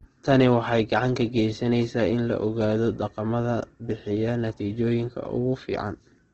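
The whole clip carries the same damage from start to finish. The speech sounds rough and grainy. Its tones have a noisy texture where they should be clean. Nothing is heard above about 8.3 kHz, so the top end is cut off and the sound is dull. This is likely Opus compression working at a low bitrate in its music mode. The encoder keeps each band's energy but fills starved bands with noise or folded copies. That fits a rate near 16 kbps.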